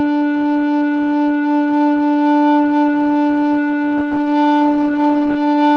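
From 3.99 s to the end, the music suffers a call bitrate drop: the encoder codes far more coarsely, and the sound turns rough and watery, with the top end dulled, which fits a fall from 64 to 19 kbps. Unlike packet loss, there are no gaps or clicks.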